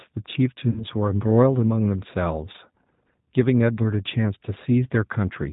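Throughout, the G.729 codec is plainly audible. The speech is rebuilt from a vocal tract filter, a pitch predictor and a few pulses per frame, which fits an 8 kbit/s stream. It sounds slightly rough and synthetic. A spectrogram shows nothing above 4 kHz.

From 0.70 to 0.86 s there is VoIP packet loss concealed by the speech codec. About 60 ms of audio went missing, and the decoder extended its last pitch and filter with falling gain. The result is stretched, fading sound that stays weak or distorted after the loss ends. The waveform tapers, and the spectrogram shows smeared, repeated patterns.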